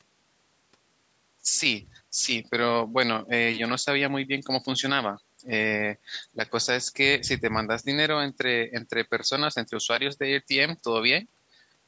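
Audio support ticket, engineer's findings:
No faults found in the speech audio; the call microphone processing works as expected, with nothing above 8 kHz.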